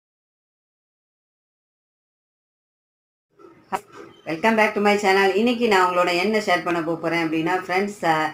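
At 3.75 to 3.77 s there's a skip ahead: the audio just jumps forward with no gap filled in at all. Roughly seven-tenths of a second never makes it out. Either it got lost on the way or the jitter buffer overflowed and dumped it while newer audio was already queued. The two sides of the cut are butted right up against each other, so it lands as an abrupt lurch rather than a dropout.

Right after, from 3.85 to 6.50 s, you get a jitter buffer speed-up. The buffer was sitting on more audio than it wants, so the receiver kept snipping out tiny slices, a pitch period or a few at a time, over and over, to bring the delay back down. Altogether something like 150 ms gets shaved off. Playback runs at about 106% speed while the pitch stays put, so that stretch feels a bit rushed.

Then at 6.71 to 6.73 s there's a single loud pop sitting on top of the sound, peaking at about 5 dB above it, and the audio carries on underneath without interruption. 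That's a sudden voltage step or spike getting into the signal and being smoothed a little by the circuitry after it. The likely culprit is a plug, a switch, static or a driver hiccup.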